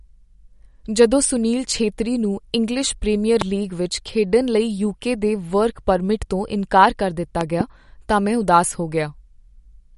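Speech that is watery and swirly throughout, with smeared consonant attacks, metallic chirps on s sounds and nothing above 11.2 kHz. This is likely MP3 compression at a low bitrate, which fits something near 49 kbps. The shifting, swirling artefacts set it apart from a plain low-pass filter, which would only dull the treble. There are also loud pops, about 15 dB above the speech, likely from a sudden voltage step or pulse such as a plug, a switch, static or a driver glitch. One comes at 3.41 to 3.44 s, right after "ਛੇਤਰੀ ਨੂੰ ਇੰਗਲਿਸ਼ ਪ੍ਰੀਮੀਅਰ", and two in quick succession come between 7.41 and 7.63 s, just before "ਤਾਂ ਮੈਂ ਉਦਾਸ ਹੋ". The speech carries on underneath each pop, which distinguishes them from dropouts or edit gaps.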